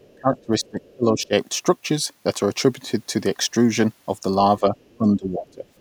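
Speech in this recording shows speech suppressed in double talk from 0.0 to 1.32 s, at 4.6 to 4.76 s and from 4.98 to 5.65 s, with dips of up to about 25 dB, likely an echo canceller ducking the talker while the far end spoke. On a waveform these look like sudden envelope collapses; on a spectrogram, like faded bands. The other side's voice leaking through appears at 0.06 to 0.16 s, 0.63 to 0.69 s, 4.77 to 4.97 s and from 5.77 s to the end, about 35 to 40 dB below the talker. It is likely residual loudspeaker echo and shows on a spectrogram as faint, patchy harmonic traces.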